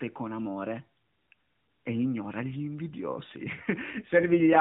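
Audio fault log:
3.92–4.60 s, AMR rate drop: the speech turns rougher, buzzier and more synthetic for the final 0.68 s, with no gap and the same narrow telephone band. This fits the mobile codec stepping down from 12.2 to 5.9 kbps, leaving fewer pulses to model each frame.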